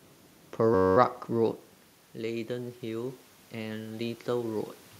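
A speech recording with two system faults. From 0.75 to 0.97 s a system hang loop occurs: the driver stalls while the hardware keeps replaying one 10.67 ms slice, which fits a 512-sample buffer, producing a steady 93.8 Hz buzz with almost no audio lost. Then, after the talker moves back around 1.5 s and the input falls by about 10 dB, automatic gain rising lifts the gain by about 6 dB between 1.28 and 4.75 s, so the voice and room noise swell together.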